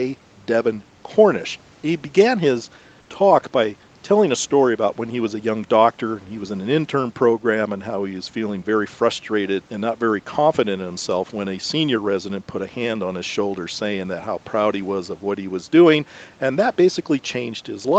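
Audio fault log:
3.01–3.09 s, comfort noise in place of the background: for about 80 ms during a pause, the real room background, which sits about 37 dB below the loud parts, gives way to a smooth, featureless hiss about 2 dB quieter, and then the natural background returns. The likely cause is discontinuous transmission in the Opus call codec: the sender stopped sending audio when it detected no speech, and the receiver filled the gap with synthetic noise shaped only roughly like the original background.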